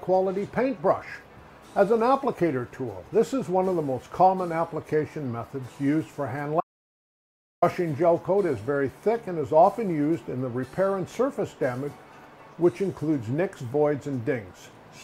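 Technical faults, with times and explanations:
6.61–7.62 s, audio dropout to silence: sound cuts out completely for 1.02 s, likely a lost input recorded as silence; waveform flatlines, spectrogram goes blank.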